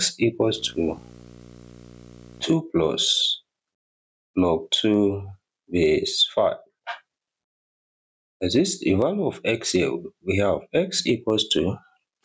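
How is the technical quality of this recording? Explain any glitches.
The recording has two audible faults: a buzz near the start and gain pumping throughout. The call processing's band limit is audible, with nothing above 8 kHz.

Video or display buzz, 0.44 to 2.44 s: a screen or video cable couples into the audio, leaving a 60 Hz field-rate buzz with hash above it, roughly 30 dB under the signal.

Gain pumping, throughout: the level swings by around 15 dB, bringing loud and soft parts closer in level and squashing the sound. The likely cause is excessive input gain driving a fast limiter.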